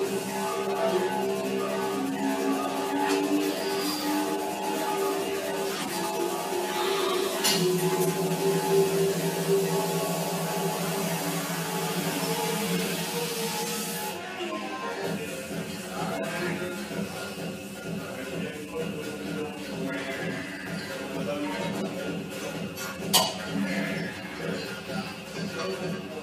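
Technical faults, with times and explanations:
throughout: channel delay (comb filtering). One channel arrives about 10 ms behind the other, and summing them to mono cancels shared content at evenly spaced frequencies, the first notch near 50 Hz and more roughly every 100 Hz above it, so the sound turns hollow and phasey.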